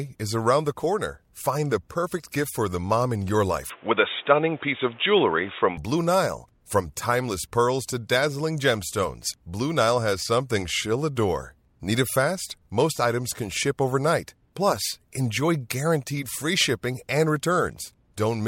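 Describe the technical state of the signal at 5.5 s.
The input likely switched to a poorer device from 3.70 to 5.78 s, just after "the mom in your": nothing above 3.8 kHz, a level shift of around 5 dB, and a new noise floor roughly 30 dB down, so the speech sounds dull and boxy.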